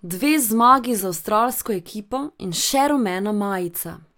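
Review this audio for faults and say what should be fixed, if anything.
Nothing here needs fixing, as the signal holds steady with no audible technical faults at any point.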